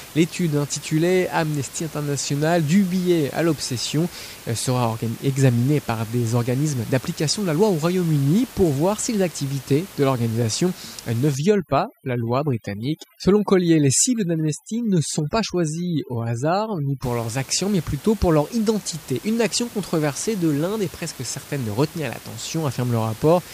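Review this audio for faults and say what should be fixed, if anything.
Overdone noise removal runs from 11.35 to 17.03 s, starting after "de l'organisation euh ne" and ending before "leurs actions mais plutôt". The suppressor pushes individual frequency bands down whenever they sit near its noise estimate, so the room noise, about 20 dB under the speech elsewhere, drops and breaks up into twinkling specks, and the quieter parts of the speech vanish with it. A bandwidth limit would instead dull the speech evenly and would not make the background flicker and vanish. Lowering the reduction strength on that section would prevent this.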